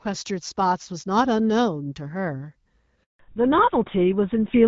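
At 3.03 s a handover gap cuts the speech: no frames arrive while the call switches networks, so the sound decays within a few tens of milliseconds and stays silent for 160 ms, until 3.19 s, when the new link starts carrying audio.

From 3.19 s to the end, the call shows a fallback to narrowband. The clean wideband sound, consistent with HD Voice around 12.65 kbit/s, gives way to a band limited below 4 kHz, which points to GSM full rate. The speech turns duller and rougher.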